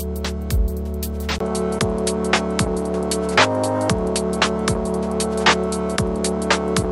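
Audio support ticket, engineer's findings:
From 1.38 s to end: nothing above 11.4 kHz, new noise about 45 dB down, 20 ms gap at 1.38 s. Likely input switched to a poorer device.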